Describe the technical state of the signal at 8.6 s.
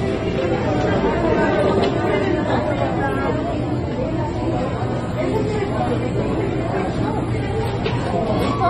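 At 8.6 s the sound, like the whole clip, has nothing above 13 kHz and a smeared, warbling, fizzy texture, likely AAC compression at a low bitrate around 24 kbps dropping fine spectral detail. Unlike a simple low-pass filter, it also leaves holes or substitute noise below the cut-off.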